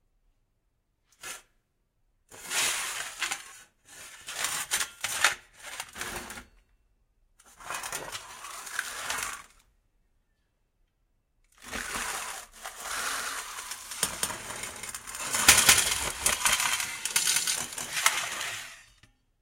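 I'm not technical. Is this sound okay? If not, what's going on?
No. Doubled audio track, 11.96 to 18.06 s: a second copy, about as loud, trails roughly a fifth of a second behind, likely from a slower recording path capturing it twice.

Damaged data in a compressed stream, 16.94 to 16.97 s: part of the stored file was corrupted, so the player stumbles there, producing a brief blip.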